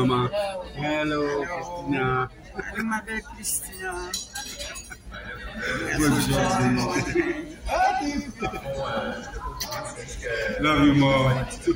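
A doubled audio track starts abruptly at 5.22 s and runs to the end of the clip: from that point a second, full-band copy of the same audio sits roughly a tenth of a second behind the original and a few decibels quieter. It carries no decay or room colouring, so it reads as a flat slapback rather than an echo. The likely cause is the signal being picked up again through a slower path and mixed back in.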